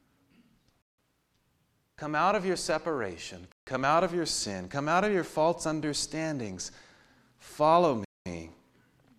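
Bluetooth stalls at 0.82, 3.52 and 8.05 s drop the speech into silence for 0.16, 0.15 and 0.21 s, likely because interference delayed packets and emptied the headphones' buffer.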